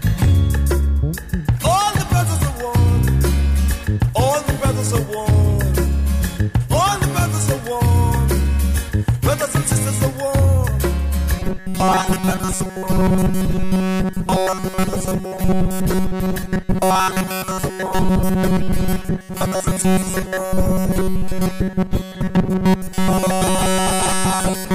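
From 11.39 s to the end, the sound collapses into a rigid, metallic buzz fixed near 188 Hz: robotic sound from repeated short buffers. New audio likely arrived too seldom, so a roughly 5.3 ms slice was looped, covering most of the real signal.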